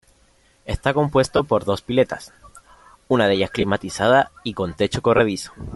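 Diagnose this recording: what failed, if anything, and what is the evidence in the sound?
Throughout the speech there is a breathy, grainy edge, with the upper band sounding thin and noise-filled rather than detailed. This is a codec problem, likely Bluetooth LC3 compression: at a moderate rate, which sounds like around 48 kbps, the encoder discards upper spectral content and fills the gaps with noise.

At 1.37 to 1.40 s, 3.61 to 3.64 s and 5.17 to 5.19 s the speech briefly turns into a short noisy smear. These are lost LE Audio frames, a network-stage fault. Dropouts of 22.5, 22.5 and 15 ms fit two or three 7.5 ms LC3 frames, which the decoder filled by reusing the last spectrum with randomised signs.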